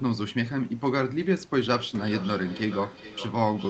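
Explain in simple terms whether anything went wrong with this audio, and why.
Feedback echo between two devices runs from 1.65 s to the end. Two devices in the same room are on one call, so one microphone picks up what the other plays. Each sound comes back roughly every 0.4 seconds, fainter than the original.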